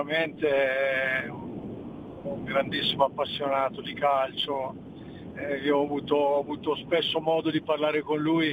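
Sample clock jitter, throughout: sampling times wander by roughly a microsecond or two, so steep slopes pick up hissy roughness about 40 dB below signal.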